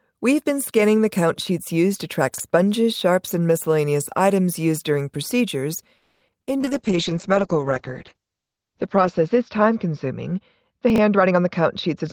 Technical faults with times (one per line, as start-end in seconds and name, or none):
2.34-2.40 chunks out of order
5.97-6.23 call audio freeze
6.27-6.49 repeated packet loss (robotic sound)
6.50-6.69 jitter buffer slow-down
6.59-12.13 call bitrate drop
10.90-10.98 chunks out of order
11.15-12.04 jitter buffer speed-up